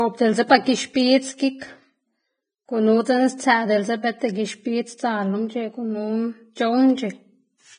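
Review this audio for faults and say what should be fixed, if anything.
Throughout the speech the treble turns hissy and grainy, consonant attacks smear, and nothing is heard above about 9.7 kHz. This is likely heavy Vorbis compression at a very low quality setting, which fits a bitrate around 20 kbps, lowering the cut-off and coarsening the upper residue into noise. Encode from the original source at a higher Vorbis quality, or use a lossless format.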